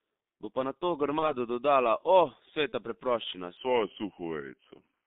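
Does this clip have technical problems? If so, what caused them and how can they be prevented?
Yes. Throughout, the G.723.1 codec leaves the speech muffled and hoarse, confined to roughly 200 Hz to 3.7 kHz, with smeared consonants. The rough, slowly updating voice model points to a bitrate near 6.3 kbit/s, not simple band-limiting. Sending audio over a wideband codec such as G.722 or Opus prevents this.

VoIP packet loss concealed by the speech codec occurs at 1.19 to 1.35 s and at 2.69 to 2.74 s. Each gap is about 30 ms, which suggests one lost frame. The decoder filled it with a fading extension of the preceding sound, and the voice stays weak a little beyond the gap. A dropout would be silent instead. Jitter buffering and forward error correction on the network path prevent this.

A section at the wrong speed runs from 3.57 s to the end. It plays at 0.866 times normal speed, so the voice becomes slower and deeper by about three semitones. 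Because tempo and pitch drop together, this is not a pitch-shift effect. It is likely caused by an editor or player using a mismatched clock. Keeping the sample rate consistent through editing and playback prevents this.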